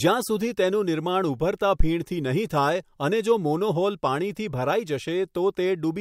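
At 1.80 to 1.90 s, a phantom power thump interrupts the speech. A supply switched on or off on a live input, and the voltage step passed through the coupling capacitors. It sounds like a deep thud peaking at about -6 dBFS, dying away within 21 ms.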